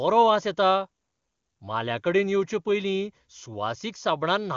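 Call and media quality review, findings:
No faults found; the speech passes through AMR wideband (HD Voice) coding with the clarity expected of its top rate, with no rasp or roughness audible.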